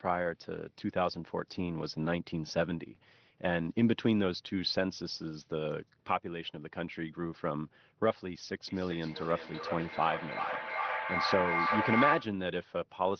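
From 8.67 s to about 12.44 s there's a feedback echo between two devices. A second device in the room is replaying the call, and the first microphone picks that playback up again. Its echo canceller only removes its own output, so the sound keeps coming round at roughly 0.4 s intervals, getting thinner and more ringing each pass. At its peak the echo reaches about the same level as the speech, so the repeats pile up rather than fading. All of it sits within the roughly 6 kHz band of the call codec.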